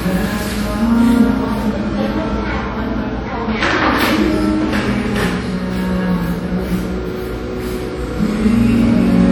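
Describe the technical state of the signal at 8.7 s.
WMA compression damage is present at 8.7 s, as it is across the whole clip. The likely cause is a Windows Media Audio transform encoder at a low rate, consistent with roughly 48 kbps. Its quantisation noise smears over tens of milliseconds around each event, and weak spectral lines are dropped, so the sound has a plainly audible ringing, washy quality and a hiss that swells and fades with the signal. Nothing is present above 19.9 kHz.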